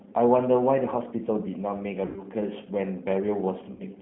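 Throughout the speech, the sound carries the signature of the G.729 codec: the line is confined to roughly 150 Hz to 3.5 kHz, and within that band the voice has a plainly audible rough, slightly synthetic grain, which fits an 8 kbit/s model-based coder rebuilding each frame from a filter, a pitch predictor and a few pulses. Simple band-limiting would sound narrow but clean. This roughness comes from the modelling itself.

From 2.06 to 2.23 s, VoIP packet loss concealed by the speech codec takes over for about 100 ms, which points to roughly five lost 20 ms packets. Instead of going silent, the decoder stretches the last pitch and filter into a buzzy tone or coloured noise that fades. The voice then stays weak and smeared briefly after the real audio returns. The same happens at 3.72 to 3.83 s, over about 80 ms. A dropout would leave hard silence, while here the gap is filled and fades gradually.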